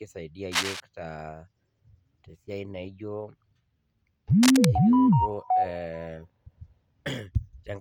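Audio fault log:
0.51–0.80 s and 4.43–4.68 s, cable scratch noise: likely a worn cable or connector being moved, its contact resistance fluctuating rapidly and injecting dense, irregular noise bursts about 5 dB below the speech, heard as brief scratching and rustling over it for about 0.3 s and 0.25 s respectively.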